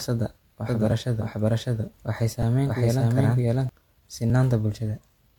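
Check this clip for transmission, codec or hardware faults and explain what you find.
Three kinds of fault are audible in this speech clip: a layered codec character throughout, a second copy of the speech for about three seconds, and three brief clicks.

Transcoding between lossy codecs, throughout: the speech carries two overlapping sets of compression artefacts, and nothing is present above 18.5 kHz. The likely cause is an HE-AAC stream at 40 kbit/s re-encoded as MP3 at 96 kbit/s. The MP3 stage spends bits on the earlier damage and adds its own.

Doubled audio track, 0.68 to 3.69 s: a dry, full-band second copy of the speech runs roughly 0.7 s behind at about the same level. It has no decay or room colour, and it cuts in and out abruptly. This likely comes from a slower second capture path or an edit holding two offset copies.

Repeated buffer, at 0.91, 2.42 and 4.30 s: each is heard as a click, and the middle one is a slightly longer brief buzz. 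Audio failed to arrive in time, so the device replayed its last block of about 2.9 ms, which fits a 128-sample buffer. The block was replayed once at 0.91 and 4.30 s and three times at 2.42 s, with a hard join at each repeat.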